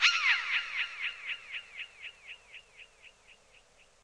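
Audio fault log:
No faults heard in this audio.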